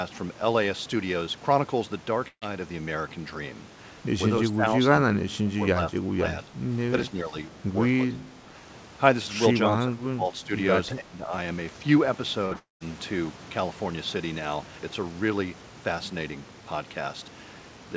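Burst of packet loss, 2.28 to 2.43 s: about 140 ms of the stream failed to arrive in time. The receiver extended the last stretch of speech for roughly 135 ms, so it smears into a held buzz or hiss that sinks and then goes quiet for about 70 ms before the talker returns further along. The syllables that belonged in that gap are simply gone.

Speech suppressed in double talk, at 4.50 to 4.74 s, 4.91 to 5.55 s, 5.74 to 6.55 s, 7.03 to 7.37 s, 8.10 to 8.54 s, 9.70 to 10.52 s and 10.88 to 11.33 s: the voice repeatedly sinks and thins in patches, by about 10 dB in the milder spots and about 15 to 20 dB at worst, the deepest near 11 s. The likely cause is an echo canceller that could not separate this talker from the far-end echo and pulled down both.

Burst of packet loss, 12.45 to 12.53 s: another run of roughly 60 ms missed the decoder. About 56 ms of it was bridged by continuing the preceding sound, which gives a brief, slightly frozen smear rather than true silence, and the audio then skips forward over the lost portion.

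Short concealed packet loss, 12.53 to 12.57 s: straight after that, about 20 ms more went missing. The receiver patched it from the sound just before and blended it back into the real signal. It registers as a tiny wobble, and it adds to the ragged run of damage in this second.

Long network dropout, 12.59 to 12.82 s: the final and longest hole, about 220 ms, is most likely a network stall. The decoder extends the last sound as a fading buzz or hiss that decays into about 150 ms of silence, then the speech resumes with that stretch missing. Throughout, the call path's G.722 coding leaves nothing above 8 kHz, consistent with a 64 kbps stream.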